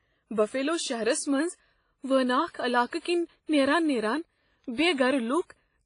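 Throughout the speech, a transform codec, likely WMA compression at a low rate consistent with about 24 kbps, discards weak spectral detail and leaves nothing above 10.1 kHz. The result is heavy damage: a dull, ringing, washy tone with hiss that swells and fades with the talker.

Because that codec spreads quantisation noise across whole blocks, sharp onsets pick up pre-echo: a brief hiss running ahead of the attack at 2.51 s (34 ms), 2.87 s (57 ms), 2.99 s (59 ms), 4.73 s (54 ms) and 4.94 s (41 ms), blurring each onset.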